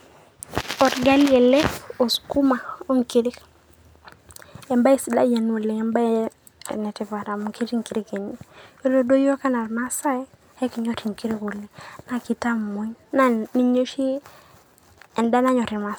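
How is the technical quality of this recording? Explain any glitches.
The technical quality of this recording is sound, with no glitches to explain.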